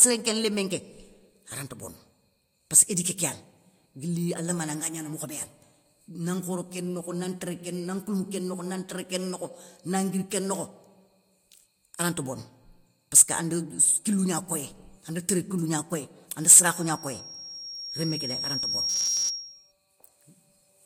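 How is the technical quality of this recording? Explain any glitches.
The recording has two clear faults near the end. Both fall in the last few seconds of the speech.

From 16.68 to 19.72 s there is loudspeaker feedback squeal. A microphone is picking up a loudspeaker that it feeds. At 5.6 kHz the loop gain goes above one, so that tone keeps feeding itself. It swells over about two seconds. At its peak it is roughly as loud as the speech. It is a piercing, single high whistle.

From 18.89 to 19.30 s, inside the squeal, the speech turns robotic. It becomes a rigid metallic buzz at 188 Hz. It still loosely tracks the speech. The likely cause is repeated short buffers. New audio arrives too late, so the last short stretch, about 5 ms, is replayed again and again. That repetition sets the fixed 188 Hz pitch. Most of the sound in this stretch is repeats, and the real audio there is lost.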